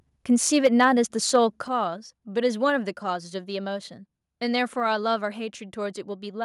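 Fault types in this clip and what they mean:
microphone overload: From 0.56 to 0.85 s and at 1.34 to 1.36 s, the loudest speech peaks turn harsh and crackly, likely from input gain pushing the converter about 2 to 3 dB past full scale. The waveform shows flattened, squared-off tops, and the spectrogram shows broadband smearing above the voice.
microphone volume stepped down: At 0.67 s the speech and background drop by about 2 dB, then at 1.68 s by about 6 dB, both soon after distorted stretches, likely from call software cutting the microphone's input gain. The waveform envelope shrinks in one abrupt step, and the spectrogram dims across all frequencies at once.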